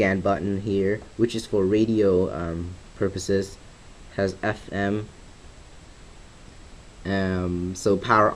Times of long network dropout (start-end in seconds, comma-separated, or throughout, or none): none